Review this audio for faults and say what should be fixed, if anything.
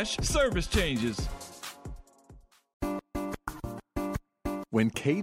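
A corrupt frame decoded at 3.56 to 3.58 s gives a brief chirp-like blip peaking at around -35 dBFS. Flipped bits in what sounds like a single compressed frame made the decoder read wrong gains or codes, putting energy at the wrong frequencies for that frame's length. To prevent it, protect the stream with checksums or error correction so damaged frames are detected and concealed rather than played.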